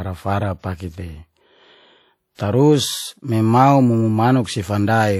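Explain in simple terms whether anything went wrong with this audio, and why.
Yes, two problems can be heard in this speech. Throughout, the audio has a washy, ringing quality, with a hiss that swells and fades along with the speaking, and nothing above about 16.5 kHz. This damage is plainly audible and is most likely WMA compression. The encoder saved space by describing the sound in blocks of time and discarding weaker detail. The errors it left behind smear across each block, which produces the ringing and the breathing hiss.

At 2.35 to 2.39 s, just before "tarus memau", a short hiss of about 39 ms comes ahead of the sound itself, and the start sounds softened. This is pre-echo. The compression spreads its error noise evenly over a whole block. Here a sudden loud start fell late in a block, so noise meant for the loud part spilled into the quiet moment just before it.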